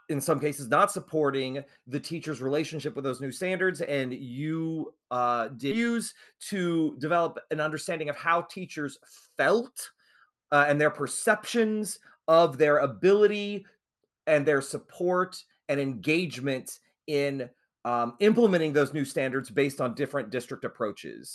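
Skip ahead at 5.71 to 5.73 s, just after "standards and you uh": roughly a second of speech was dropped while later audio waited, so playback lurches forward with no gap.

Jitter buffer speed-up from 7.66 to 8.85 s, after "to develop an": the receiver trimmed about 70 ms of pitch periods to reduce excess delay, so the speech runs about 5% faster at unchanged pitch.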